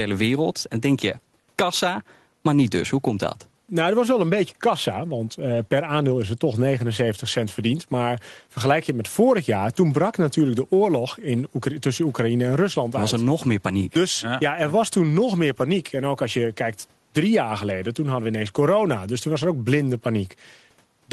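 No technical faults occur anywhere in this speech clip; it carries the ordinary coding character of a working call path.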